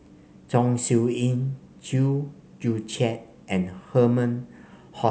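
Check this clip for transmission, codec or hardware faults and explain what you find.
No faults were found.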